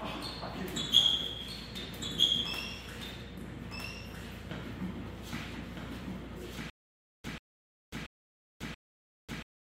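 From the start, a doubled audio track runs through the clip: a second full-band copy trails about 1.5 s behind, roughly 5 dB quieter. It is likely a duplicate capture or misaligned edit. Unlike an echo or reverb, it has no decay and no room colour.

At 6.70 s a stutter with silent gaps begins and lasts to the end. A 137.71 ms burst repeats four times, once every 681.46 ms, separated by 543.75 ms of digital silence. A stalled stream replaying its last fragment is the likely cause. The dead silence between bursts sets it apart from a seamless loop.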